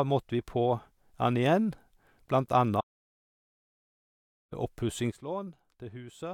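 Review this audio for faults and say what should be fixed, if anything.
The speech cuts to dead silence from 2.81 to 4.52 s, with no room tone, losing about 1.7 s: an audio dropout to silence, likely from a lost input link while recording continued.

At 5.12 s the speech and its background noise drop together by about 12 dB and stay down: a sudden gain jump, likely an unramped digital gain change.

Monitoring input connections during capture and applying gain changes through short ramps would prevent both faults.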